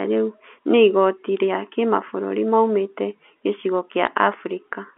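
At 4.07 s, right after "maumĩte gĩcigo", there are bit errors on a digital phone line. A small fraction of bits, roughly 0.15 percent, were flipped in the G.711 mu-law stream. Each flipped bit throws a single sample to a wrong value. On the waveform this appears as an isolated spike jutting from the trace. On the spectrogram it is a thin vertical line spanning the 250 Hz to 3.5 kHz telephone band.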